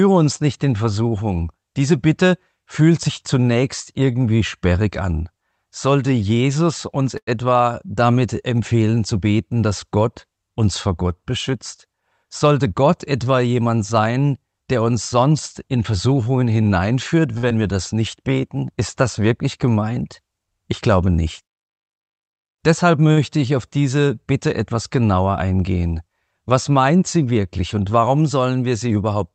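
At 7.17 to 7.29 s a short stall from a late packet occurs. The jitter buffer ran dry and the receiver stretched the current sound by about 98 ms before resuming at the same point, so a sound hangs with a faint buzz. Shorter stalls of about 51 ms at 17.38 to 17.45 s and about 52 ms at 23.12 to 23.19 s sound the same way. From 11.53 to 12.74 s a jitter buffer speed-up plays the speech at 107% without a pitch change, trimming about a tenth of a second of pitch-period slices to shrink excess buffered delay, which makes the passage sound hurried. At 17.49 to 17.52 s, just after the second stall, short concealed packet loss smears the sound briefly: about 20 ms never arrived, and the decoder bridged the gap by extrapolating the preceding sound before blending back. A second speed-up at 107% runs from 22.37 to 23.05 s, removing roughly 50 ms.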